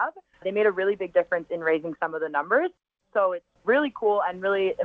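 No technical faults can be heard; the audio has passed through a call path whose content stops at about 8 kHz, consistent with a wideband codec such as G.722, and it carries no dropouts, glitches or distortion beyond that normal coding.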